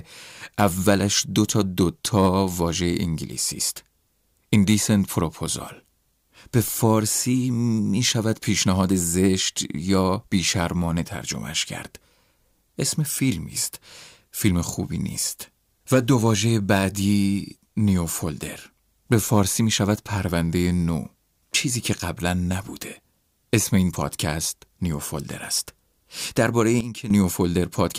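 A sudden gain jump occurs at 26.81 s: the speech and the background noise beneath it drop together by about 12 dB in a single step, with no fade, and stay at that lower level until 27.10 s. The abruptness means the level changed from one sample to the next rather than being ramped. This is likely a digital gain setting or bit shift applied instantly in the signal chain.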